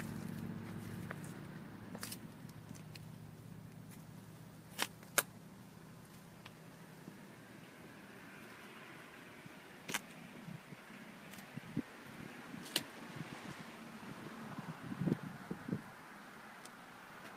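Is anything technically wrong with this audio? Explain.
No, nothing technically wrong stood out on listening to this audio.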